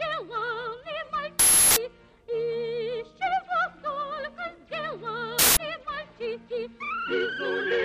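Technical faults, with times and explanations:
1.39 to 1.77 s and 5.39 to 5.57 s, uninitialised buffer: two short, loud bursts of digital noise cut into the sound, lasting about 0.37 s and 0.19 s. A playback buffer was sent out before any audio had been written into it, so whatever stale data sat in that memory was played as samples. The lengths fit whole blocks of about 16384 and 8192 samples, which is why each burst starts and stops abruptly.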